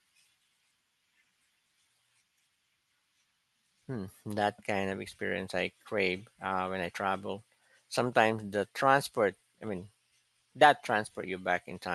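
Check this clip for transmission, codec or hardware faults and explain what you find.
Nothing stood out on listening to this speech recording over its call path.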